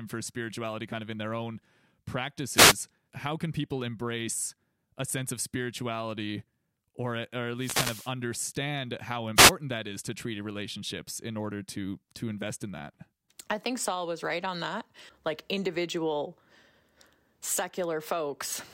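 Speech recorded over a wireless microphone suffers three noise hits, at 2.54–2.75 s just before "how can people embrace", 7.56–8.12 s, and 9.35–9.52 s before "that is to treaty". Each is a brief swish of static as the FM signal fades and receiver noise rises. They appear as broadband vertical smears on a spectrogram and fuzzy noise bursts in the waveform.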